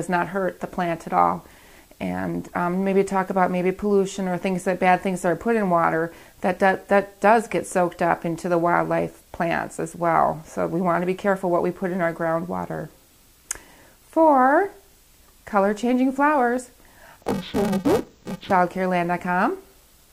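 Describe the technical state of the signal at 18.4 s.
At 18.4 s the signal is in a stretch of interleaved audio read as planar, running from 17.22 to 18.51 s. Each 128-sample block, about 2.9 ms, has its alternating left and right samples split into two halves that play at half speed side by side. With blocks this short the sound turns dull and robotic, buzzing at 345 Hz. Unlike a sample-rate error, it shows no clear octave drop, and the overall pace is unchanged.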